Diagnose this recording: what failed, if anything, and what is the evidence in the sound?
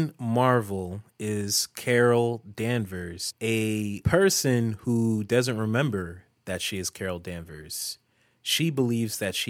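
Converter-stage sample clock jitter throughout: a faint hiss rides on the louder, brighter speech and drops away in pauses. Timing wobble under a microsecond leaves error roughly 40 dB down.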